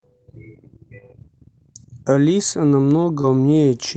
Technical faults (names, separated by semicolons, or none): short concealed packet loss